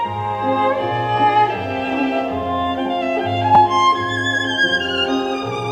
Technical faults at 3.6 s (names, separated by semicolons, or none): repeated buffer